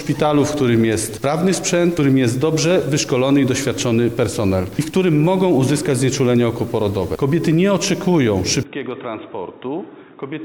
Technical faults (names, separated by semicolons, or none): input switched to a poorer device